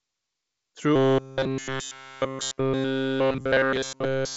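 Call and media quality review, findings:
Robotic sound from repeated short buffers, 0.96 s to end of clip. Speech collapses into a rigid metallic buzz at 133 Hz, with near-total repetition. Likely a starved playout buffer looping its last block. 133 Hz fits a block of about 7.5 ms. Underlying G.722 path at 56 kbit/s is audible as a light upper-band hiss, with content stopping near 7.7 kHz.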